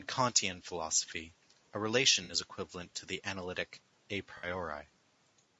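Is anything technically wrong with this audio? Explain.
Yes. The audio has been through a low-delay AAC compression stage, most likely AAC-ELD. Its short frames resolve pitch harmonics poorly at the low bitrate this suggests, around 32 kbps. The result is plainly audible throughout: grainy, rough speech with noise filling the gaps between harmonics.

There are two AAC frame losses with concealment, at 2.23 to 2.33 s and at 4.37 to 4.47 s, each about 60 ms long, which fits three lost frames. At each one the decoder rebuilt the missing audio from the last good spectrum, so the speech briefly turns smeared, noisy and phasey. The call microphone processing limits the sound to nothing above 8 kHz.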